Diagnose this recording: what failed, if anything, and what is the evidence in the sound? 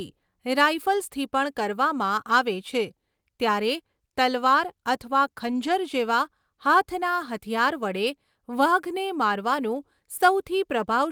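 Network packet loss, covered at the codec by lost packets rebuilt from error correction: from 5.47 to 5.69 s the speech continues without a gap but turns rougher and noisier. About 120 ms was played from the low-bitrate copies carried in following packets, which fits roughly six lost packets.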